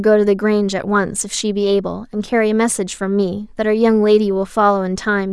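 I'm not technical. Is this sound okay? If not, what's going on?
Yes, nothing stood out as a problem when I listened to this recording.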